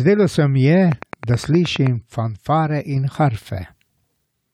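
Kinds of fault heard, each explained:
Train of clicks: around ten evenly spaced pulses at 9.5 per second from 0.92 to 1.88 s, peaking about 10 dB above the speech, likely electrical interference.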